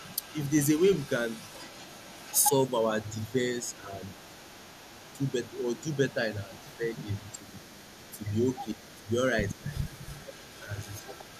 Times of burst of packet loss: none

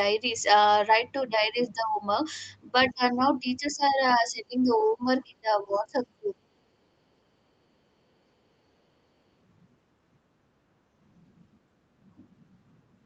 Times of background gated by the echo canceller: 7.13-7.25

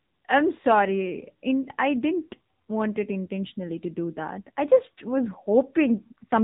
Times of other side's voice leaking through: none

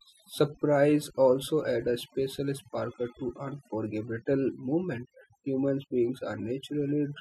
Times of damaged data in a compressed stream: none

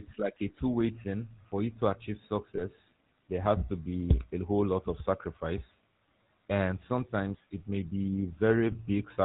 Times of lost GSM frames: 2.56-2.61, 8.72-8.76

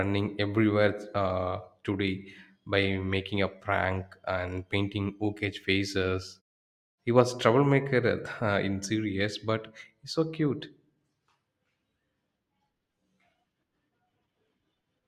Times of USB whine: none

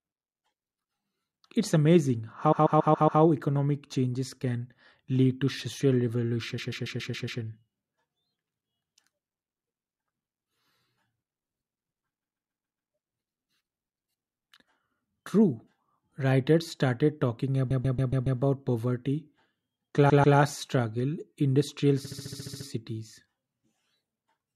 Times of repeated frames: 2.51-3.21, 6.57-7.41, 12.22-12.91, 17.70-18.39, 20.09-20.37, 22.04-22.66

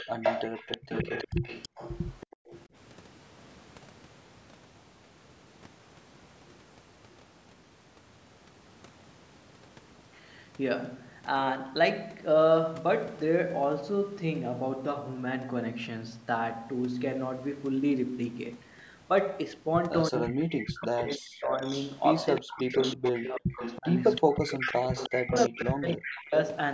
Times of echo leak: 0.00-2.61, 20.83-26.20

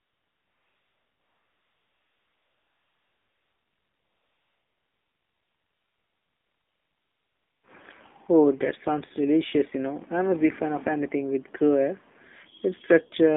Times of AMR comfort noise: 0.00-7.64

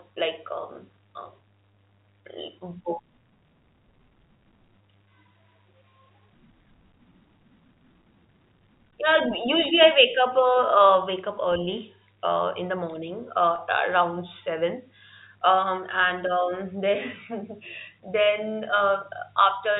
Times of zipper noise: none

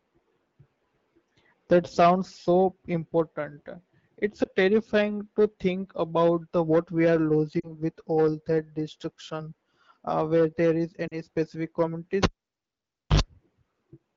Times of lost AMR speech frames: 4.44-4.49, 7.59-7.72, 11.08-11.14

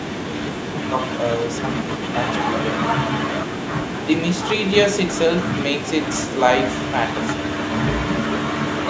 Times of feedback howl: none

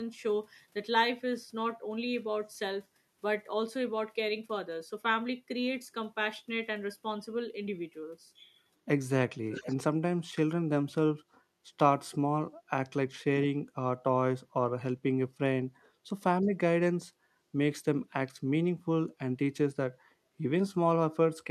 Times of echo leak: 9.52-9.76

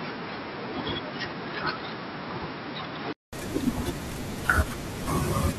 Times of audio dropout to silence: none

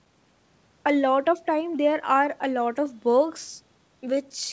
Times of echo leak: none

